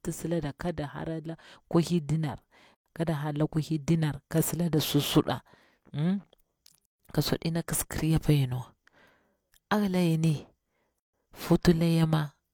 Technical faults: gap at a join of encoded pieces

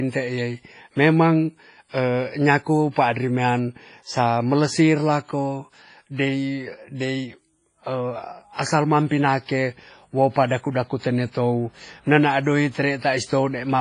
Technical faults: WMA compression

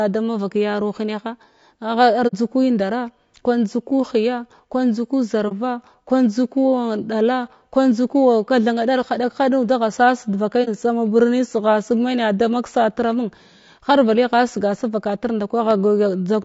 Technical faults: low-delay AAC compression; AAC frame loss with muting; loud pop

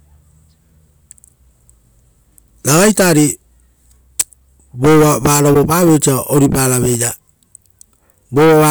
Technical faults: damaged data in a compressed stream

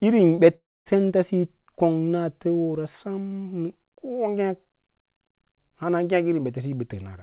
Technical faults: short concealed packet loss; long network dropout

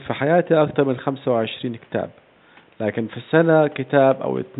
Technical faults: none

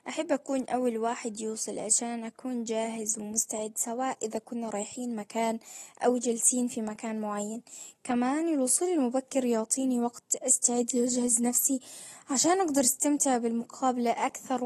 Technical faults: AAC compression

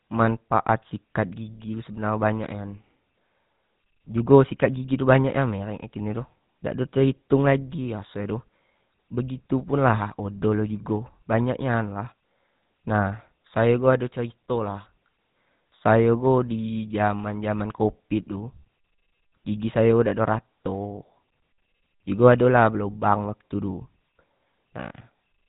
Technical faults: GSM full-rate codec

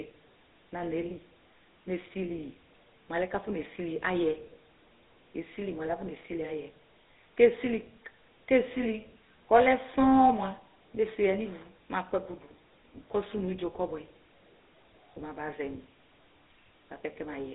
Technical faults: GSM full-rate codec

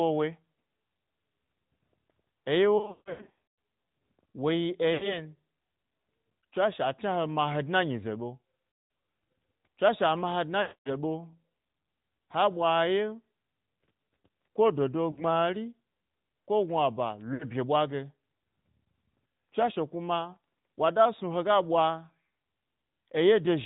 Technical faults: AMR narrowband mobile codec; lost AMR speech frames

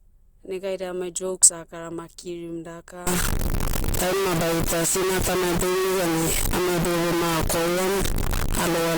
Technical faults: low bit depth without dither

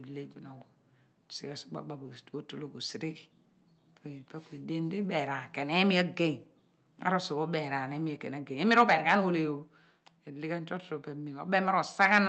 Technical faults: microphone overload; microphone volume stepped down

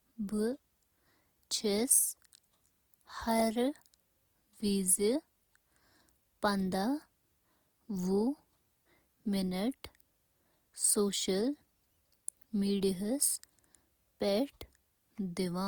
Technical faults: Opus compression

